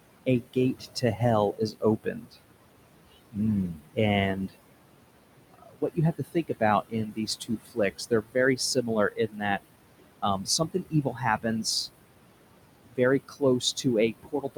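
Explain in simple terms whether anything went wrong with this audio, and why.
Yes, two related problems. Throughout the clip you can hear noise suppressor artifacts: the room noise gets pushed down hard between phrases and creeps back under the talking, so the background pumps.

The second is speech cut by the noise suppressor, where it mistook bits of the voice for noise and turned them down too. You'll hear parts of the speech sound swallowed or faint at 0.26 to 1.21 s, 1.53 to 2.43 s, 3.69 to 3.98 s, 4.36 to 4.56 s, a long patchy stretch from 5.54 to 9.62 s, 10.22 to 11.65 s, and from 12.88 s to the end.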